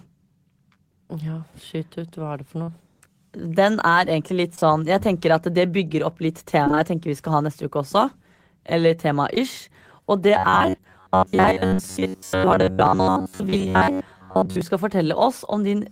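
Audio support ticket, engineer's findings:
Short concealed packet loss: brief smears and wobbles at 2.63–2.69 s (right after "er det for"), 4.55–4.66 s with a second hole at 4.59–4.63 s, 9.35–9.39 s, and back-to-back at 11.69–11.74 s and 11.74–11.78 s. Each hole is about 20–40 ms, patched by the receiver's concealment extending the preceding pitch or noise and then crossfading back. Isolated events, no steady pitch: this separates it from the buffer buzz below.

Repeated packet loss (robotic sound): choppy, metallic stretch at 6.64–6.80 s, straight after "det bygger opp litt". Four gaps in 160 ms, the longest about 21 ms, with roughly half the span synthesized by concealment. Network/jitter path: packets lost or late in quick succession, each patch barely ending before the next starts. The span is short, unlike the fixed-pitch buzz.

Robotic sound from repeated short buffers: rigid metallic buzz at 93.8 Hz from 10.37 to 14.61 s, still loosely tracking the speech, with most of the stretch repeated material. 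Likely cause: audio output starved, so the playback side loops the last ~10.7 ms of audio, which fits a buffer of that length, while fresh audio is skipped. Constant buzz pitch regardless of the talker distinguishes it from packet loss. The concealed losses at 11.69–11.78 s fall inside this stretch.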